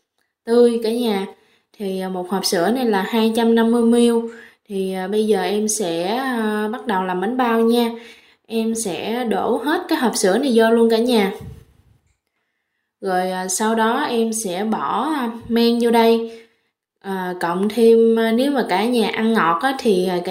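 Nothing in the signal points to a technical fault, with no breaks, distortion or level problems anywhere in the recording.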